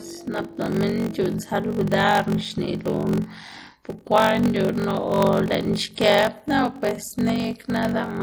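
From start to finish the speech has a watery, swirly texture, with metallic chirps on the s sounds and softened consonant attacks. That combination is likely MP3 compression at a low bitrate, something around 40 kbps. The encoder runs short of bits, cuts the treble at a fixed point, and lets weak frequency lines drop in and out from frame to frame, which produces that swirl.

Also running the whole way through is a steady low buzz at 46.9 Hz, with the speech playing slow at 0.861 times normal speed while the timbre stays the same. That's a padded block size mismatch. One stage hands over shorter blocks than the next one reads, and the leftover space in each block is filled with zeros. The buzz rate fits a 1024-sample read. Those silent gaps repeat at the block rate, which creates the buzz, and because they add time to every block the speech drags.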